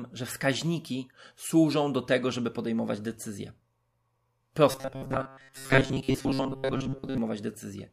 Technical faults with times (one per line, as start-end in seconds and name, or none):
4.71-7.18 robotic sound from repeated short buffers